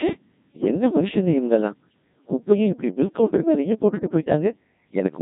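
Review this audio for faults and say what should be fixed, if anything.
The whole recording sounds robotic and buzzy, typical of the Codec 2 vocoder, consistent with roughly 1.6 kbit/s, rebuilding speech from pitch, voicing and envelope rather than the waveform. Sending the speech over a higher-rate codec that keeps the waveform would prevent this.

From 0.60 to 0.68 s there is a brief warbling glitch in pitch and tone, caused by bit errors on digital voice radio, with around one bit in ten flipped, consistent with a single corrupted vocoder frame. Better signal strength or stronger error protection on the radio link would prevent it.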